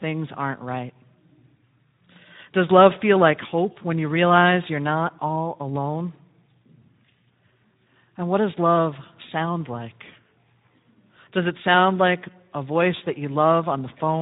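Throughout the speech, Speex codec damage is plainly audible: the CELP coder has too few bits to model the excitation, so voiced sounds turn hoarse and noisy, consistent with a bitrate of roughly 11 kbps.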